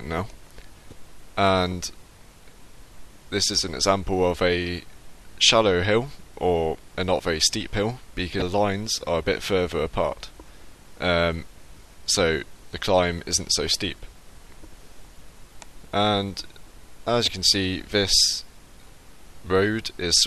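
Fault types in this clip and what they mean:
Damaged data in a compressed stream: three brief blips, at 0.89–0.92 s, 8.39–8.42 s and 17.24–17.28 s, each about 30 ms. Corrupted bytes in the encoded stream knock the decoder out of frame sync until it finds the next valid frame header.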